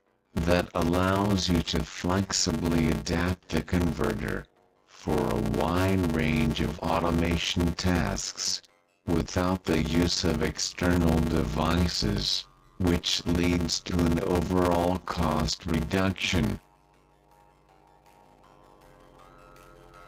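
A block size mismatch (padded) runs through the whole clip: one stage hands over shorter blocks than the next reads, which fits a 512-sample read, and the remainder is zero-filled. The resulting gaps buzz at 93.8 Hz, and the audio plays at 0.625 times normal speed with its timbre intact.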